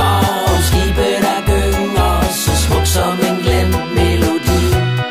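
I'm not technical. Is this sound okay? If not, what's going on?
Yes, this sound is okay, and there's nothing going on in it that needs explaining.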